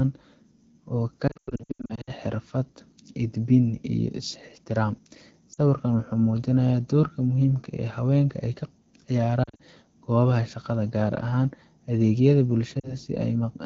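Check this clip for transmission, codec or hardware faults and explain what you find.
Yes, there are lost AMR speech frames, four bursts of them. After "oo ka", from 1.27 to 2.11 s, the speech warbles and drops out repeatedly. Failed frames force the decoder to stretch the last good pitch and vocal tract settings at falling gain. Shorter glitches land at 5.53–5.59 s, 9.43–9.61 s and 12.80–12.95 s. The AMR wideband (HD Voice) codec itself sounds clean, consistent with roughly 12.65 kbit/s.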